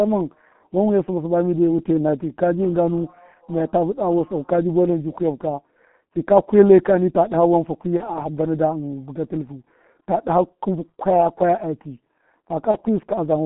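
Throughout the speech, the G.723.1 codec narrows the sound to about 150 Hz to 3.4 kHz and heavily roughens it, which fits a rate near 6 kbit/s. Unlike simple band-limiting, which only muffles, it adds a hoarse grain and smears consonants, because the coarse voice model updates only every 30 ms.

At 7.97 to 8.12 s and again at 12.71 to 12.78 s, VoIP packet loss concealed by the speech codec stretches the preceding sound into a brief buzzy tone or coloured noise that fades. Each gap fits a single lost 30 ms frame. A plain dropout would leave silence or a click. Here the decoder repeats its last pitch and filter. The first event runs well past 30 ms as the voice recovers.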